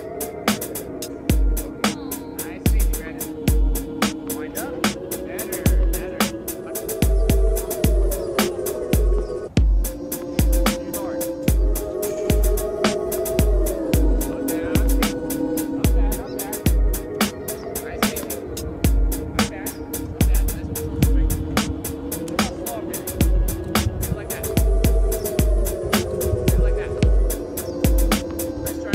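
No audible technical faults occur anywhere in the clip.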